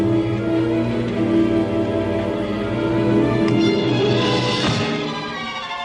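No technical faults can be heard anywhere in the clip.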